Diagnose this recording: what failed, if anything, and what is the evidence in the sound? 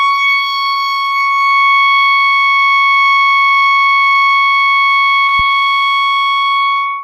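The network stage dropped audio in a short concealed packet loss between 5.25 and 5.29 s. About 20 ms went missing, and the decoder covered roughly 18 ms by extending the preceding music. The result is a brief smear rather than the hard silent gap of an unconcealed dropout.

At 5.39 s a phantom power thump enters at the analogue input stage and dies away by about 5.54 s, with a 33 ms decay. A supply switching on a live input pushes a voltage step through the coupling capacitors. The deep, decaying thud distinguishes it from a sharp digital click.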